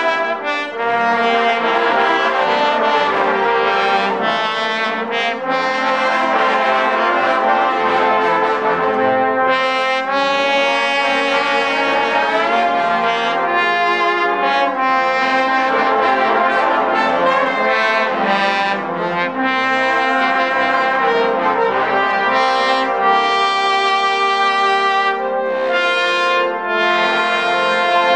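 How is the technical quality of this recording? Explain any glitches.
No glitches or technical faults can be heard anywhere here.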